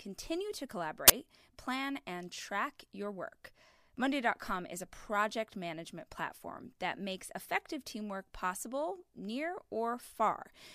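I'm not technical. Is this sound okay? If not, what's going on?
No. At about 1.08 s there's an uninitialised buffer: the playback system sent out a chunk of memory before any audio had been written into it, so leftover data played as sound. You hear a brief, loud burst of harsh digital noise, lasting about 20 ms.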